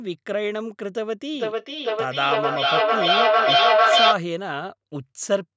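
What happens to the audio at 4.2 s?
At 4.2 s, a feedback echo between two devices is just ending. It runs from 1.35 to 4.23 s. One device replays the other's microphone, which picks it up again. The speech returns about every half second and builds to about 7 dB above the original.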